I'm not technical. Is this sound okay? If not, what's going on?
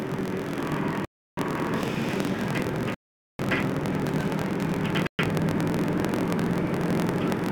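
No. Two things are wrong.

Throughout the clip, a filter restarted on every block: a processing step forgets where it was each time it handles the next chunk of audio. Each restart adds a tiny tick, about 43 per second, which fits a 1024-sample block. Together the ticks form a buzz that gets louder when the sound does.

The sound also cuts to silence three times: from 1.05 to 1.38 s, from 2.94 to 3.39 s, and from 5.07 to 5.19 s. Each time it picks up again afterwards. This is likely a Bluetooth stall, where wireless interference delayed the audio and the headphones ran out of sound to play until it arrived.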